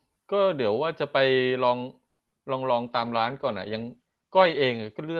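At 2.07 s the speech stalls for about 0.19 s in a call audio freeze. The last sound is stretched into a fading buzz for roughly 120 ms, then about 70 ms of silence, most likely because packets arrived late and the jitter buffer ran dry. Unlike packet loss, nothing is cut out; the speech resumes where it stopped, now slightly delayed.

Right after, two short concealed packet losses appear at 2.28 to 2.34 s and 2.38 to 2.42 s, lasting 40 ms and 20 ms. Those moments never reached the decoder, so the receiver extrapolated from the preceding sound and blended back in. The result is a brief smear or wobble rather than a pause, and that bit of the speech is actually missing.

From 2.88 s to 5.06 s a call bitrate drop takes the Opus stream from 32 kbps, which carries audio up to about 12 kHz, down to 13 kbps for roughly two seconds. The coarser coding makes the speech sound rough, watery and duller. 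This is a sustained change in tone, not a momentary glitch or gap.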